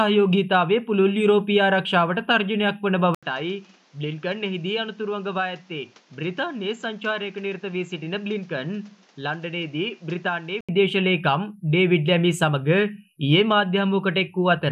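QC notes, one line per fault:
3.15 to 10.69 s, input switched to a poorer device: after a brief 80 ms gap, the sound turns dull and drops roughly 10 dB. Nothing passes above 7.6 kHz, and a new noise floor sits well below the signal. A likely switch to a narrower-band input.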